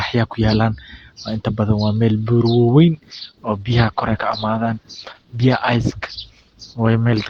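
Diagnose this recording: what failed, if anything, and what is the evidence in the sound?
The failure is at the network stage, where an adaptive stream fell back to a lower bitrate. Right after "waa meel bura wawen", at 2.93 s, the quality steps down abruptly with no gap and stays degraded to the end. Codec artefacts rise. When the connection slowed, the player switched to a leaner encoding, which fits a drop from Opus at about 64 kbit/s to about 16 kbit/s.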